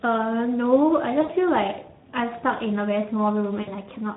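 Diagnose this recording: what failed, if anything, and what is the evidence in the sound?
The speech sounds hoarse and noisy throughout. This is codec damage at the Speex stage: a CELP coder with too few bits for its excitation, fitting a setting around 11 kbps.

At 1.21–1.33 s and again at 3.61–3.72 s the speech smears into a stretched, fading sound, then recovers weakly. This is VoIP packet loss concealed by the speech codec: the network dropped about 80 ms and 60 ms of packets, and the decoder extrapolated from its last pitch and filter.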